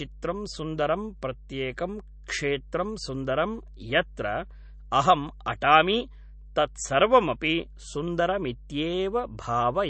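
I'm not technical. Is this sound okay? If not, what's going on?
No. Mains hum runs throughout: a steady low 50 Hz tone from the power supply, probably via a ground loop or nearby transformer, sits under the speech. MP3 compression is the likely cause of the plainly audible watery, swirly quality heard throughout. Squeezing the file dropped weaker sound details and removed everything above about 8.3 kHz, dulling the speech.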